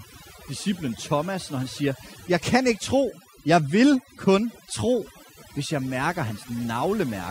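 From start to finish the speech carries overdone noise removal. A noise reduction stage set far too aggressively has been pulling individual frequency bands down or out whenever they sat near its noise estimate, taking the softer parts of the voice along with the noise. Between phrases the background collapses to near silence dotted with twinkling, chirpy specks. On a spectrogram the gaps look mostly empty, with isolated flickering dots, and the voiced regions appear patchy and moth-eaten.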